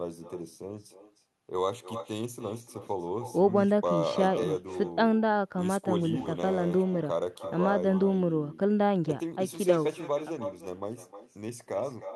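Nothing on the far end cancels the echo, so its loudspeaker output leaks into its microphone and returns the speech roughly a third of a second later. Throughout, every phrase trails a thinner copy about 11 dB down: echo with no canceller.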